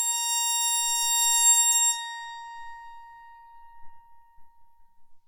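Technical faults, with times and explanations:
Nothing technical gets in the way of this music, so there's no fault to report here.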